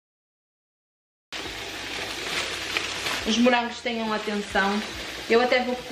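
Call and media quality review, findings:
Cut-off start, 0.00 to 1.33 s. Capture or stream opened late; audio before the cut was never recorded. Digital silence until 1.33 s, then sound enters mid-event with no natural attack or fade-in.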